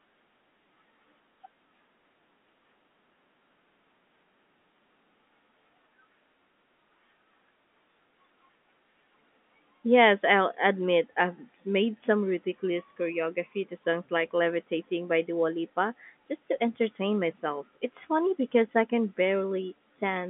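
The speech arrives over an ordinary G.711 telephone path working as it should, its band running from about 200 Hz to 3.5 kHz with nothing above 3.7 kHz, and no faults can be heard.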